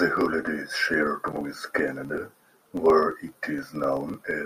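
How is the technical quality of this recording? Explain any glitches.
The recording is marred by one continuous processing fault that runs through the whole speech clip. A filter restarted on every block resets its memory at each boundary and begins again from silence, so each block opens with a small transient. At about 23.4 Hz, which fits a 2048-sample block, these merge into a steady low buzz that rises and falls with the speech level.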